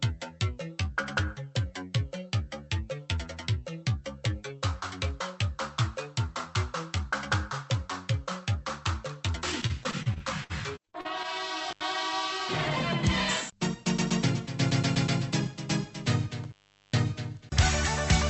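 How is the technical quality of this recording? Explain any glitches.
The recording has two kinds of glitch: a choppy stretch from dropped packets and a couple of dropouts from a bad connection. It sounds like it came over a call codec, with the top end topping out around 8 kHz.

From 9.61 to 11.26 s there's repeated packet loss (robotic sound). Around a dozen short holes, the longest near 58 ms, get patched by stretching the previous sound, which leaves it choppy, with pieces missing.

The intermittent contact shows up at 11.70 to 11.82 s and again at 16.44 to 16.97 s. A loose plug opens for about 79 ms, then about 413 ms, so the sound cuts out with crackle at each edge.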